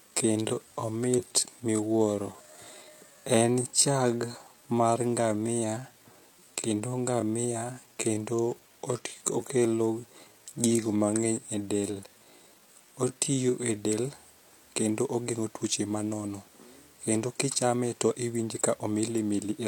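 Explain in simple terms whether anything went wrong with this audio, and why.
From the start to 13.76 s the speech plays slower, at about 0.72 times normal pace, yet its pitch stays the same. That marks a time-stretched section, likely software lengthening the audio by repeating tiny pieces, which makes it drag. Simply playing audio slower would also lower the pitch.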